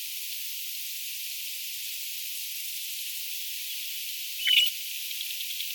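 At 1.83 s to 1.97 s, and again more heavily from 4.42 s to 4.70 s, the audio breaks into DAB burbling: a few watery blips the first time, bubbling, squelchy chirps over the sound the second. Residual bit errors of a fraction of a percent slip past error correction, corrupting MP2 scale factors so individual sub-bands jump in level. The second burst's length suggests about a dozen frames hit. Unlike a dropout, burbling does not silence the sound; it gurgles through.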